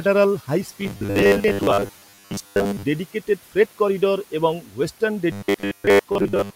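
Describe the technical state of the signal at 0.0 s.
At 0.0 s the speech signal is intact, with only the room's own background noise sitting about 24 dB below the speech.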